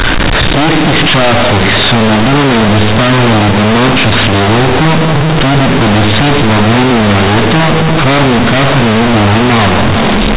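Companded audio read as linear runs through the whole clip. The speech was coded as A-law, but the bytes are played back as plain linear 8-bit samples without expansion. Every sign change therefore throws the output across about half its range, so quiet passages come out as loud as strong ones and the waveform is badly bent. The result is very loud, buzzy distortion, with heavy noise filling the pauses, all within the 4 kHz bandwidth of the A-law telephone coding.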